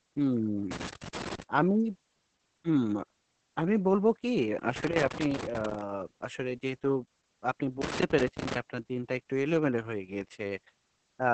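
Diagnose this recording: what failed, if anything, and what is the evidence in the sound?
At the codec stage, the speech was squeezed through Opus voice compression in its SILK mode at a rate that points to about 10 kbps. Nothing survives above roughly 8.6 kHz, and the coarse excitation coding leaves the speech muffled, hoarse and slightly robotic throughout.

In the analogue wiring, a loose connector crackle appears as a worn contact repeatedly makes and breaks. It chops the signal into irregular bursts of scratching from 0.71 to 1.43 s, 4.76 to 5.81 s, and 7.82 to 8.56 s.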